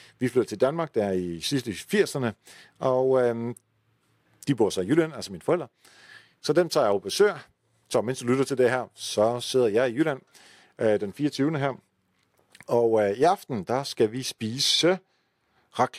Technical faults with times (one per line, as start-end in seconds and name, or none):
none